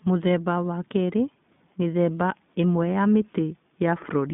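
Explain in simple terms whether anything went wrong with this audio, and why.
Throughout the whole clip, the speech has been squeezed through the iLBC codec, a low-bandwidth internet-calling codec. Nothing above about 3.8 kHz survives, so voices sound thin and muffled, like a phone call. It's plainly audible as a rough, slightly synthetic grain, because the codec rebuilds sound in independent 20 ms chunks. Simple phone-line filtering would sound just as muffled but smooth; this roughness is what marks the codec.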